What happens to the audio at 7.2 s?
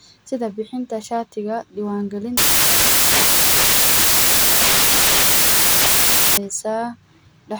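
Nothing goes wrong at 7.2 s; the speech plays through that moment intact, with no dropout, click or distortion.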